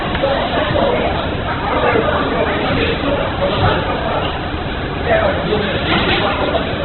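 From start to finish the sound is dull and grainy, with nothing above about 4.1 kHz. Tones come out rough and noisy rather than swirly, which points to heavy Opus compression in its CELT music mode, likely at a very low bitrate around 8 kbps.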